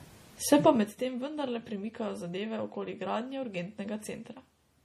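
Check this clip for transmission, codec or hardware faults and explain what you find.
Two faults stand out in this speech clip: a codec-style degradation across the whole recording and a burst of zipper noise early on.

Throughout the clip the speech has a watery, swirling quality, with hissy consonants turning metallic and chirpy, and nothing at all above 15 kHz. The likely cause is MP3 compression at a bitrate low enough to fit about 40 kbps. When bits are scarce, the encoder discards weak frequency components and caps the treble. On a spectrogram this shows as a hard horizontal ceiling at 15 kHz, with isolated blocks of energy below it flickering on and off from frame to frame.

From 0.60 to 0.98 s the level falls by about 15 dB, but it does so in roughly 2 dB increments, around twenty per second, with no smoothing between them. This is zipper noise: each abrupt step puts a small discontinuity into the waveform, so a fine ticking, zipping texture rides on the speech while the level drops. 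The waveform envelope here looks like a staircase rather than a ramp, and the spectrogram shows faint vertical broadband lines at each step.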